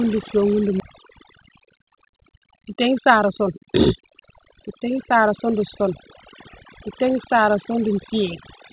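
Speech carried over a call path whose band ends at 4 kHz, consistent with G.711 mu-law at 64 kbps, with overdone noise removal audible from start to finish. The noise suppressor was set far too aggressively, so any frequency band sitting close to its noise estimate is pulled down hard or muted outright. The background collapses into near silence dotted with brief twinkling specks. Softer components of the voice are stripped along with the noise.

At 0.8 s there is a skip ahead. Around 0.4 s of speech was discarded while later audio was already queued, and nothing fills the hole. The material on either side is butted together almost seamlessly, so playback lurches forward and the listening delay shortens by about the same amount.

From 1.24 s to 5.81 s a jitter buffer speed-up runs. The receiver, holding more audio than its target, repeatedly cuts out short segments a pitch period or a few long. 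That trims roughly 0.3 s in total and plays the passage about 6% fast without shifting pitch, so the speech sounds slightly hurried.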